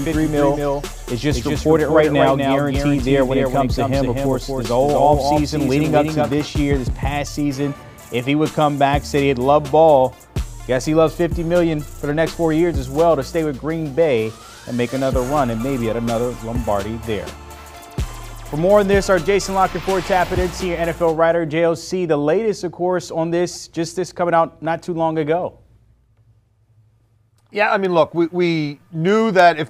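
A doubled audio track is under way from the start until 6.34 s. A dry, full-band copy trails the original by about a fifth of a second, some 5 dB quieter, then stops abruptly. It likely comes from the same audio being captured again through a slower path.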